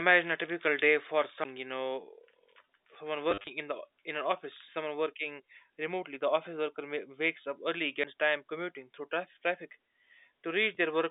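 It's a speech clip carried over a phone line with G.711 coding, so it's narrowband at roughly 200 Hz to 3.7 kHz. Two kinds of fault show up. There are two CD skips, one at 1.44 s right after "a typical day for" and another at 8.04 s right after "wakes up early". Each is a little tick and a very short mute, around 15 ms and 10 ms respectively, before the audio picks up again from a different spot. That's the classic sound of the laser jumping to another turn of the disc's spiral, whether from a knock or a flaw in the disc, so the playback suddenly lands somewhere else in the recording. The other problem is packet loss with the last packet repeated. Between 3.31 and 3.47 s, about 110 ms of audio goes missing across a 160 ms stretch, and the longest gap is 40 ms. Each hole gets filled by replaying the previous packet, and that repetition comes across as a brief robotic stutter. The way it breaks up points to 10 ms packets. 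There's one more single-packet repeat at 10.75 s, and it comes through as a small blip.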